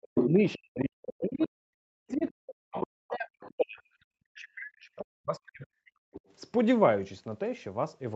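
From 0.00 to 1.54 s the talker's speech sinks in pieces, about a second in all and up to about 40 dB down. This is speech suppressed in double talk, likely an echo canceller ducking everything while both sides speak. On a waveform it shows as collapsed stretches. Inside that span, at 0.15–0.59 s, the other side's voice leaks through at roughly the talker's own level, with a fainter scrap at 1.40–1.48 s. On the spectrogram these leaks appear as a second harmonic pattern, all below the 8 kHz ceiling of the call band.

The same ducking returns at 1.94–3.98 s and 4.37–6.18 s, each time cutting about 1.5 s of speech. Quieter leakage shows at 2.10–2.31 s (faint), 2.71–2.85 s (moderately below the talker) and 6.14–6.33 s (faint).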